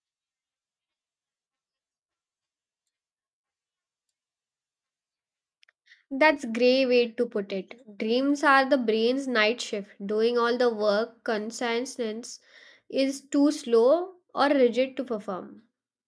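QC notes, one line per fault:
No fault found.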